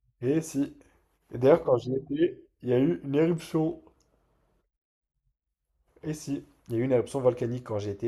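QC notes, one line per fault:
Nothing stood out on listening to this speech recording.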